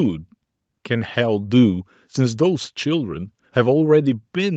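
No technical faults can be heard anywhere in the recording.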